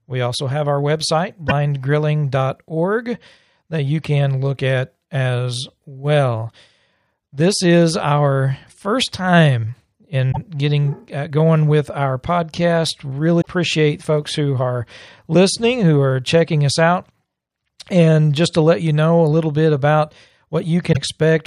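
At 1.48, 10.31, 13.41 and 20.92 s the speech jumps ahead abruptly, each time through a brief garbled disruption lasting 40, 64, 60 and 52 ms respectively. These spans are roughly two to three 24 ms frames long, which points to a likely broken MP3 bit reservoir. Frames were lost, so the following frames reached back for borrowed data and decoded bytes belonging to other frames before the stream recovered.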